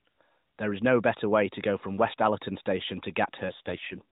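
From 3.48 to 4.02 s an AMR rate drop makes the speech rougher and buzzier, consistent with a fall to about 4.75 kbps; the spectrogram keeps its band without gaps.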